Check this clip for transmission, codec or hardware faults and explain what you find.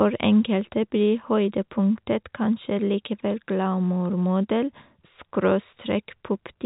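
Nothing here counts as a transmission, codec or hardware fault; the speech just has the narrow, boxy character of an ordinary A-law telephone line, which is how that path is meant to sound.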